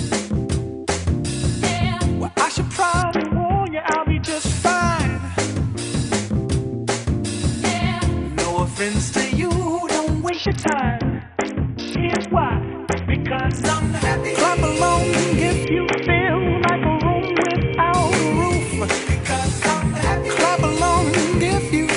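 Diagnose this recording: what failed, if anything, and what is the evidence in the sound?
The codec stage of a Bluetooth link failed with a Bluetooth SBC bit pool drop, heard three times: 3.02 to 4.26 s, 10.29 to 13.64 s and 15.64 to 17.94 s. Each time the treble goes dull and a gritty quantisation noise rises, then clears. This fits the bit pool falling from about 31 to 6, near 55 kbps, which starves the upper sub-bands. Unlike packet loss, the sound never drops out. It only degrades and then recovers.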